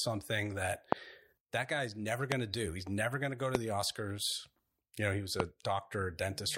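Sharp, single loud pops at 0.92, 2.32, 3.55 and 5.40 s jump well above the speech, which continues underneath. They're likely voltage spikes from a switch, plug or static discharge.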